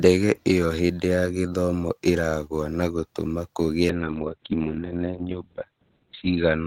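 A speech clip with a call bitrate drop from 3.9 s to the end: the encoder's bit budget collapses, audibly consistent with falling from about 32 kbps to 6 kbps, so the voice turns rough and muffled for roughly 2.5 s. On a spectrogram, content above 4 kHz vanishes abruptly at 3.9 s, leaving a flat ceiling where the band reached 20 kHz.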